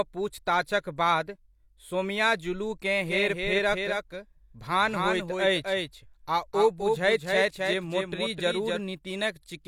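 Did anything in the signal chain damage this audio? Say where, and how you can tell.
Yes. Between 3.07 s and 8.79 s there is a doubled audio track: a full-band copy of the speech trails by roughly 300 ms, about 5 dB quieter, and cuts in and out abruptly. It lacks an echo's decay or room colour, so it likely comes from a slower second capture path or a misaligned edit.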